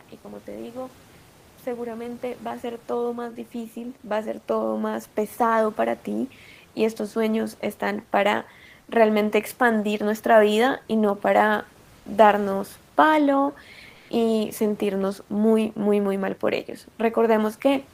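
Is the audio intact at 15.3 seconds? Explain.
Yes, the speech at 15.3 seconds is intact, with only the room's own background noise, about 33 dB below the speech, beneath it.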